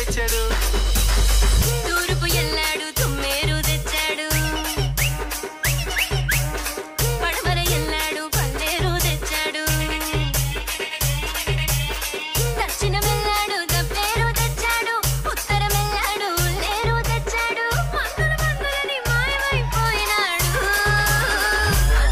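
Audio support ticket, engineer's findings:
Dull, muffled stretch from 16.70 to 19.86 s. Treble rolls off smoothly, down about 8 dB at 10 kHz relative to 1 kHz. Diagnosis: de-emphasis applied wrongly. A de-emphasis filter in the playback or decode chain is the probable culprit. It cuts treble on material carrying no pre-emphasis, or duplicates an earlier cut. Gentle, even slope, no notch or ringing. Check emphasis flag handling for this segment.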